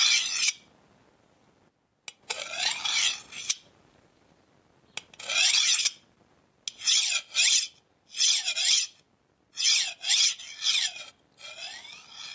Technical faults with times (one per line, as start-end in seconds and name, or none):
0.00-12.35 gain pumping